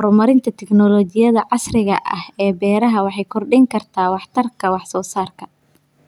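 No audible technical faults anywhere in the speech recording.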